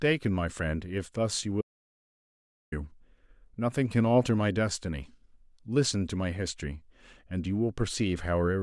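Speech recording with an audio dropout to silence from 1.61 to 2.72 s: 1.1 s drops to silence without room tone, likely a lost input link.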